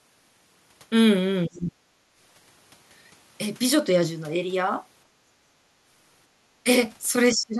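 From 1.47 to 1.82 s the speech sinks sharply, by something like 35 dB, so it nearly vanishes before recovering. This is speech suppressed in double talk, likely caused by the echo canceller mistaking the near talker for loudspeaker echo while both sides spoke, and attenuating everything. On a waveform the envelope collapses to a thin trace. On a spectrogram the speech energy fades across the band, leaving a pale vertical gap.

At 2.10 to 2.16 s the room background dips by about 7 dB for an instant and then returns. This is background gated by the echo canceller: while the far end played, the canceller pulled the microphone down hard and then released it. A waveform shows a brief notch in the noise floor, and a spectrogram shows a faint, narrow lighter stripe.

The same double-talk suppression recurs at 7.32 to 7.57 s, shallower at around 20 dB. The speech audibly dips rather than disappearing, with a dimmed patch on the spectrogram and a reduced envelope on the waveform.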